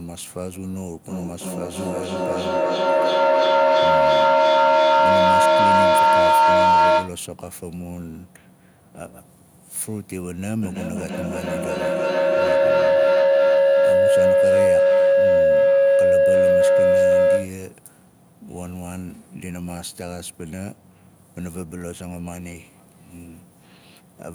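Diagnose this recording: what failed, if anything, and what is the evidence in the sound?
What failed is a feedback howl, an acoustic loop at the call stage with two devices in the same room. It builds from 1.07 to 7.25 s, ringing around 1 kHz and peaking about 14 dB over the speech. It returns from 10.62 to 17.63 s, lower this time at around 500 Hz and about 13 dB up. Both pulse roughly every 300 ms, which is the loop's round-trip delay. Each pass gains level and narrows toward whatever frequency the loop favours, until the loop breaks.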